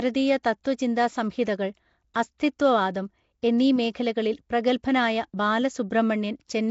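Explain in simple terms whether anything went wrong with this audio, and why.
The whole recording has a rough, hissy, underwater sound with nothing above about 7.7 kHz, most likely from Nellymoser compression, the old Flash microphone codec. At 0.64 s and again at 2.14 s, there's pre-echo: a brief hiss just before a sharp sound, because the codec smeared its noise backwards by about 15 ms, softening the attack.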